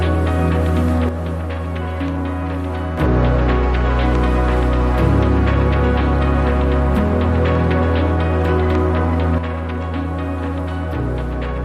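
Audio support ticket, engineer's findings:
One channel drops out, twice. 1.09 to 2.98 s, then 9.38 s to the end. Sound falls abruptly by about 6 dB, then returns at full level after the first gap. Likely cause: one side of the stereo feed lost, e.g. a loose connector or failing channel path. After mono summing, shared content halves in level. Anything present only in the missing side vanishes completely.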